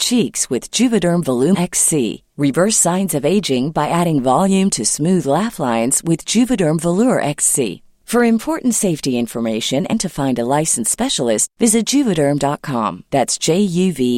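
At 1.53 to 1.56 s, and again at about 9.92 s, the speech is broken by brief glitches, the mark of damaged data in a compressed stream. Corrupted bytes in the encoded file make the decoder misread those frames and lose its place until it locks onto the next valid frame header. A plain dropout would leave silence. These are short glitches lasting only tens of milliseconds.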